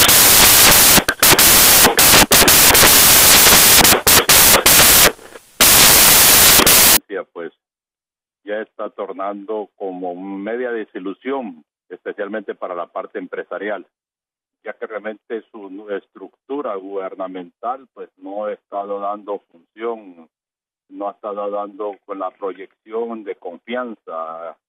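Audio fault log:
0.00–6.97 s: samples built from the wrong bytes. The bytes of each sample are assembled in the wrong order or alignment, so the rapidly changing low-order bits land in the most significant positions. The result is loud, harsh broadband noise.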